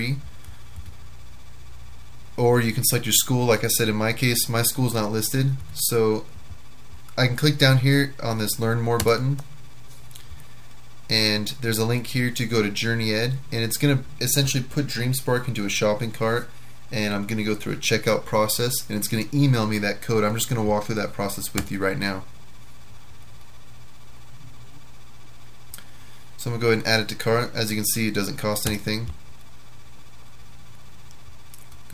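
Listening through the whole recording, nothing stood out as a technical problem.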